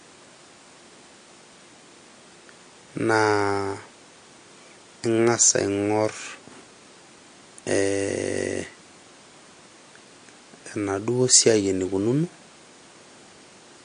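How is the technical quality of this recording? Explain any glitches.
Technical quality takes a clear hit from lossy compression that runs through the whole speech clip. It sounds like MP3 compression, likely at a low bitrate; the damage fits something around 48 kbps. Nothing comes through above 9.8 kHz, because the encoder chops the treble at a fixed point to save bits. Weaker frequency detail gets dropped and then reappears frame by frame, so the sound turns watery and swirly, s sounds pick up a metallic chirp, and consonant attacks smear.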